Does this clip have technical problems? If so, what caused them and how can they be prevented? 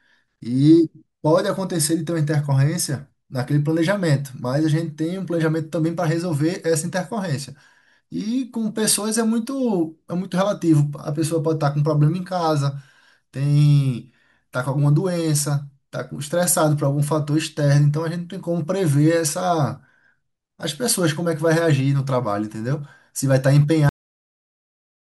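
Yes. The speech has a cut-off end at 23.89 s: it stops mid-sound and drops straight to digital silence, with no decay, until the clip ends. The final buffers were never written or played out. To prevent this, flush and close the recording or playback stream fully before stopping.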